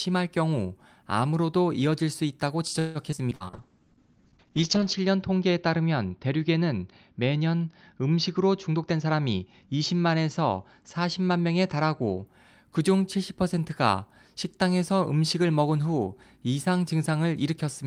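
Repeated packet loss (robotic sound) runs from 2.79 to 3.43 s: five gaps, the longest 156 ms, are patched by stretching earlier sound, leaving the speech choppy with pieces missing.

A jitter buffer slow-down follows at 3.51 to 4.31 s. The receiver repeats pitch periods to rebuild its reserve, adding 129 ms, so the speech drags at about 85% speed without dropping in pitch.

A call bitrate drop lasts from 3.53 to 12.32 s. The encoder falls from 32 to 7 kbps and the bandwidth shrinks from 20 kHz to 8 kHz, making the speech muffled and rough, worst for about 1.3 s at the lowest rate.

A jitter buffer speed-up from 8.70 to 9.81 s trims short pitch-period pieces, roughly a fifth of a second in total, so the speech briefly sounds hurried at about 116% speed.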